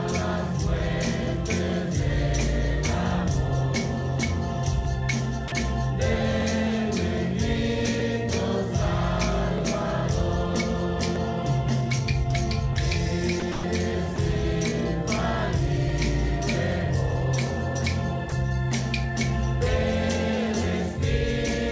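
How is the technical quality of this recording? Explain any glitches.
The recording carries two recurring glitches, heard through a call codec path that leaves nothing above 8 kHz.

From 0.12 s to 20.62 s a click or pop repeats every 1.58 s, about fifteen times. These are most likely clock drift buffer slips. Two clocks roughly 700 ppm apart let a buffer creep until a small block of samples, around fifty, is dropped or repeated.

At 5.48–5.52 s (40 ms), 13.40–13.42 s (20 ms), 13.52–13.64 s (120 ms), 14.16–14.18 s (20 ms) and 18.30–18.32 s (20 ms) the sound briefly gives way to flat, steady noise. This is sound dropped by the voice detector, which likely mistook signal for background and stopped sending while comfort noise filled the gap.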